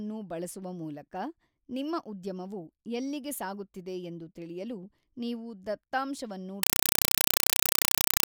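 At 6.63 s the speech cuts out and, through to the end at 8.28 s, you get a compressed stream played as audio. An AC-3 bitstream, which sounds like 192 kbps, went out undecoded, so each 4 ms noise burst repeats 31.25 times a second as loud, chattering static.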